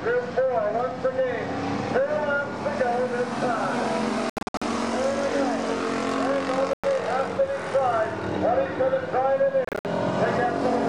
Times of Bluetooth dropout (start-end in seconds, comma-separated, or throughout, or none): 4.30-4.62, 6.73-6.84, 9.65-9.85